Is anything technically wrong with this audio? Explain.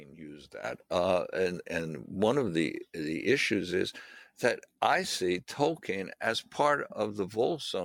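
Yes, there's a sudden gain jump at 0.64 s. From that point to the end, everything comes up by about 10 dB in one step, background noise included, so the floor lifts right along with the sound. It's likely a digital gain change applied between one sample and the next with no ramp, maybe a level setting or a bit shift. That's why it steps up abruptly instead of fading in.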